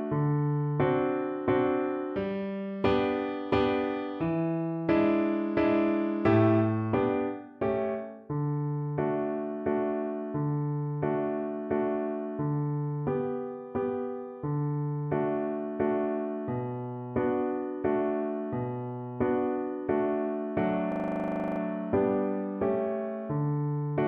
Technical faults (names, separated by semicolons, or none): system hang loop